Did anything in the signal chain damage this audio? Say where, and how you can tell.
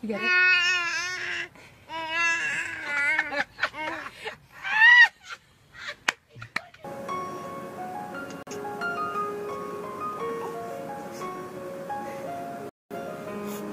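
Yes: the sound cuts to silence at 8.43–8.51 s and 12.69–12.96 s, a digital broadcast dropout where the receiver muted failed frames at the reception stage.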